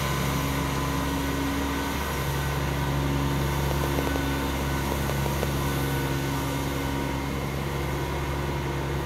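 From 3.71 to 5.44 s, a train of clicks: about ten similar pops, unevenly spaced near 4.7 per second, around 10 dB above the sound, likely from interference or a faulty connection.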